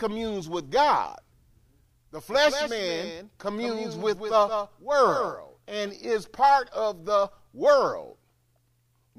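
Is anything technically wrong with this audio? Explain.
Yes. From 2.32 to 5.90 s, starting just before "is part of the", the speech carries a doubled audio track: a second full-band copy of the same speech trails roughly a fifth of a second behind, around 10 dB quieter. This is likely a slower second capture path or two misaligned copies in an edit. Unlike an echo or reverb, the copy is a single clean repeat with no decay or room colour, and it starts and stops abruptly.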